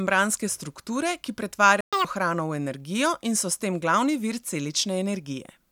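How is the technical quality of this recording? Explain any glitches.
There are two linked glitches a little under two seconds into this speech clip: a brief dropout, then a quick sped-up burst as playback catches up.

First, a playback stall from about 1.81 to 1.93 s. The sound just cuts out in mid-flow for 120 ms, a short but clearly audible hole. The likely cause is the player running dry on buffered data, or its audio thread getting blocked, so nothing reaches the output until it recovers. When it resumes, it carries on right before "hrano v energijo in".

Right after that, from about 1.93 to 2.05 s, there's a catch-up at higher speed. To make up the lost time, the player resamples its backlog and runs it at 2x for roughly 120 ms. Because it's resampling rather than time-stretching, pitch rises along with speed, somewhere around ten semitones, so that stretch, going into "hrano v energijo in", sounds chipmunky and rushed before it drops back to normal speed and pitch.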